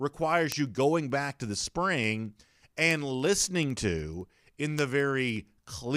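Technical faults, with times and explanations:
0.16–5.94 s, word clock ticks: sharp ticks recur roughly every 70 ms. An unlocked receiving clock drifts, so single samples are dropped or repeated.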